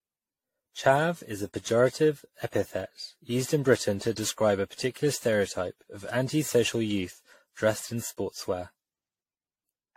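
Generation loss runs throughout the speech, with nothing above 16.5 kHz. It sounds swirly, hollow and smeared. This likely comes from roughly ten repeated AAC-style lossy encodes.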